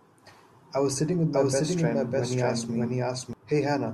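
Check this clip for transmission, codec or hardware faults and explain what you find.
One fault stands out, a doubled audio track. It runs from 1.33 s to 3.33 s, starting just after "I was sitting with". A second copy of the speech plays roughly 0.7 s behind the first, at about the same level. That copy is full-band and dry, with no decay or room colour, and it cuts in and out abruptly. The likely cause is the same signal being captured twice, once through a slower path.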